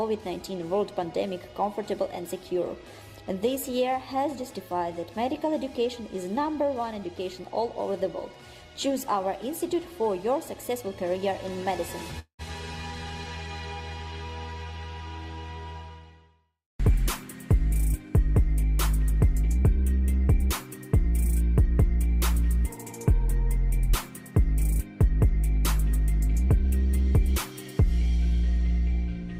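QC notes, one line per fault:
12.19–12.42 s, long network dropout: sound trails into a fading buzz, then 100 ms of silence, and 200 ms never returns. Likely lost packets, unlike a brief click.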